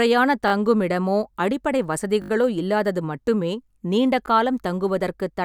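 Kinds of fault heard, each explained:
Repeated buffer: fresh audio failed to arrive in time, so the playback device replayed the last short block, whose length fits a 20 ms buffer. This clip has three stutters: at 0.48 to 0.52 s before "தங்குமிடமோ அடிப்படை", 2.22 to 2.30 s before "இல்லாதது மட்டுமே நீண்ட", and a single click at 4.26 s. No speech is lost. The waveform shows identical 20 ms segments tiled back to back with hard joins, and the spectrogram shows thin vertical broadband lines at each join.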